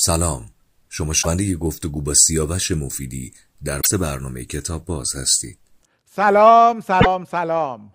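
At 1.19 to 1.27 s, 3.78 to 3.87 s and 6.97 to 7.06 s the speech breaks into brief garbled blips, each under a tenth of a second, from damaged data in a compressed stream. Corrupted bytes made the decoder misread those frames and lose sync until it found the next valid frame header. On a spectrogram each shows as a short block of smeared, unnatural energy across the speech's harmonics. The waveform shows a matching abrupt discontinuity.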